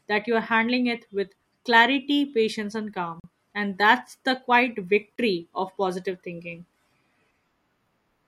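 Bluetooth stalls cut this speech clip to silence twice, at 3.20 s for about 41 ms and at 5.16 s for about 25 ms. The likely cause is wireless interference holding up packets, so the headphones' playback buffer emptied and output paused until the retransmitted audio arrived. The gaps are brief hard dropouts in the speech rather than fades or crackles.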